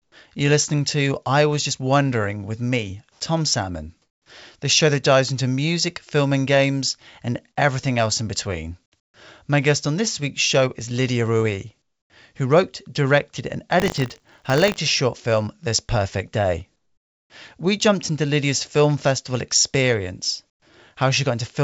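Speech recorded over a call path whose codec leaves nothing above 8 kHz, with pauses at 0.0, 3.12, 4.02 (just before "the show that dives"), 9.0, 11.82, 16.76 and 20.5 s (after "film festival experience") where the background turns steady and featureless, shifting level by about -17 to +8 dB. This is likely comfort noise in place of the background, and it shows on a spectrogram as smooth, textureless patches. Between "who wrote directed and" and "short film", from 13.78 to 14.77 s, buffer tearing adds a 50 Hz robotic buzz as small slivers of audio from about 40 ms earlier splice in, appearing as regular vertical seams every 20 ms.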